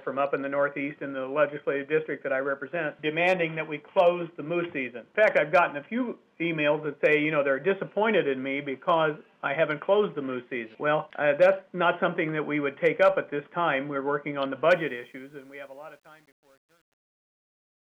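From 14.71 s to the end at 17.9 s, the fade-out shows truncation distortion. In the fade, a stage without dither keeps too few bits, consistent with about 9. Past 15.36 s the tail turns gritty.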